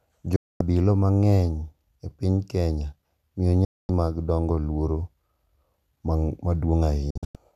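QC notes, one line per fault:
0.36–0.61 s: digital broadcast dropout; the receiver mutes for about 240 ms after a 3 ms fade, losing that audio before "mang’eny e piny".
3.65–3.89 s: digital broadcast dropout; the decoder stops receiving valid frames, so sound fades out in 3 ms and stays silent until "mag dongo luor".
7.10–7.35 s: digital broadcast dropout; several short holes totalling 192 ms across 240 ms, the longest 96 ms, as frames repeatedly fail and the receiver mutes each time.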